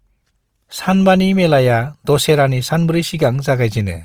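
From start to finish the speech carries a rough, grainy texture, with tones turned noisy rather than clean. The cause is likely Opus compression in its music-style CELT mode, with the full bandwidth kept. The encoder is filling starved bands with folded or noise-like content, and the plainly audible damage fits a rate around 24 kbps. Unlike MP3, there is little swirling or watery hollowness, only this persistent graininess.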